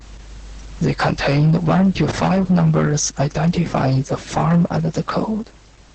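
Throughout the clip, the speech has passed through Opus voice compression running in its SILK linear-prediction mode at a very low bitrate, one that fits about 10 kbps. The coder has limited the signal to wideband, so nothing remains above 8.6 kHz, and it has quantized the excitation coarsely. The damage is heavy: the speech sounds dull and muffled, with a hoarse, buzzy roughness and a faintly robotic, synthetic quality.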